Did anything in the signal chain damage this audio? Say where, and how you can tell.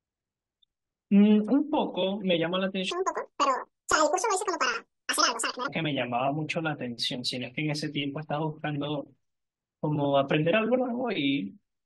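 Yes. From 2.91 to 5.68 s the speech turns high-pitched and rushed, roughly ten semitones up, then snaps back to normal. This section at the wrong speed runs at 1.96 times normal, likely from playback or editing at the wrong sample-rate clock.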